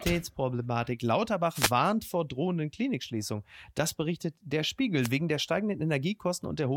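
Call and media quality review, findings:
Wireless microphone noise hit, 1.53–1.72 s, just before "vor drohenden": short burst of static over speech, about 0.19 s. Analogue FM radio link fading as reflected paths cancel; receiver noise rises above the weakened carrier. Second hit 5.01–5.10 s, right after "berichtet der": briefer swish, about 0.09 s, same mechanism. Check receiver antenna placement and diversity, transmitter position and RF path.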